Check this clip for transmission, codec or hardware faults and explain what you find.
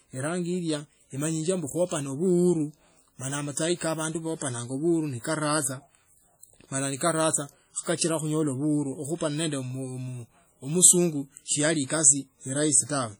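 One codec fault runs through the whole speech clip, likely WMA compression. The sound rings and washes, with a hiss that swells and fades with the signal. This happens when a transform codec with long blocks spreads quantisation noise over tens of milliseconds and drops weak spectral lines. The heavy damage fits a low bitrate around 32 kbps. On a spectrogram, look for smeared, blotchy energy around onsets and gaps where quieter components vanish, with nothing above 20.1 kHz.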